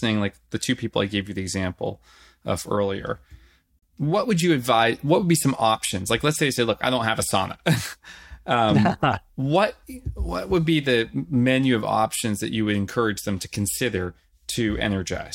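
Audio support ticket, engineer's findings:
Speech cuts abruptly to silence, 3.79 to 3.83 s, between "the example of earlier" and "what would you advise"; about 32 ms of audio missing, quick fade of about 3 ms. Digital broadcast dropout at receiver: one bad frame, likely failed checksum, muted until next good frame. Content in gap unrecoverable.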